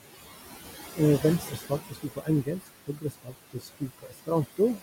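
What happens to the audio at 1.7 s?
Around 1.7 s the speech sounds swallowed and faint: from 1.21 to 1.72 s, parts of it sink by up to about 11 dB, and roughly a third of a second in total loses its softer detail. This is speech cut by the noise suppressor. The suppressor judged these quieter stretches to be part of the steady background and turned them down along with it, so they fade toward the noise floor instead of staying level with the surrounding speech.

Underneath that dip, the background noise sinks between the words and rises under them. These are noise suppressor artifacts, present throughout and so also at 1.7 s. The suppressor pulls noise down by about 15 dB frame by frame, band by band. Because its estimate keeps shifting, the room noise, sitting about 12 dB below the speech, pumps instead of holding steady.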